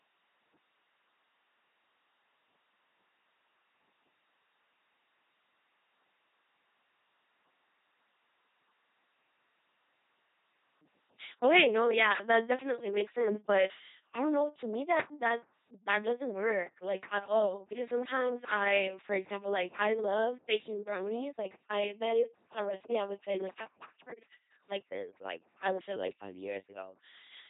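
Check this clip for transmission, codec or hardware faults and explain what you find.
One codec fault runs through the whole clip: the speech has been through a very low-rate vocoder.

LPC-10 vocoder damage, from start to finish. Every instant is rebuilt from a ten-pole vocal tract filter fed by either a pulse train or noise, so the speech sounds like a buzzing robot, with stray buzz or hiss where voicing is misjudged and nothing above 3.8 kHz. This fits a 2.4 kbit/s stream.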